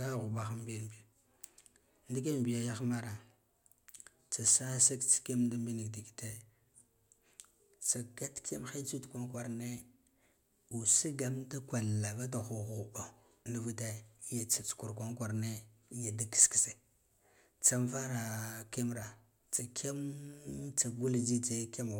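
No technical faults occur at any point in the recording.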